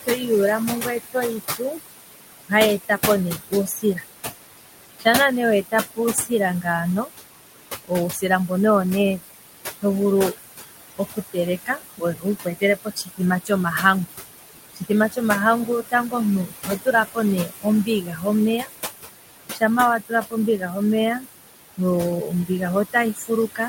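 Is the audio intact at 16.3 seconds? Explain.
No. At 16.3 seconds the speech is affected by two related processing faults.

Noise suppressor artifacts run through the whole clip. The suppressor estimates which frequency bands hold steady background and turns them down frame by frame, here by about 18 dB. The room noise, which sits only about 7 dB below the speech, drops away in the pauses and returns beneath the voice. On a spectrogram the noise floor appears as patchy, speckled blocks that flicker between frames instead of forming an even haze.

Speech cut by the noise suppressor spans 0.06 s to the end of the clip, so it covers 16.3 s. The suppressor mistakes quieter speech energy for background and attenuates it along with the noise, by up to about 21 dB at its deepest. Soft consonants and word endings sound swallowed or faint. In the waveform, phrase tails collapse abruptly. On a spectrogram, weak high-frequency consonant energy is missing or broken into fragments.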